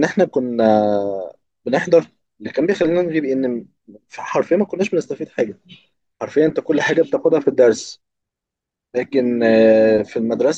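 No technical faults can be heard anywhere in this speech recording. There are no events to place in time.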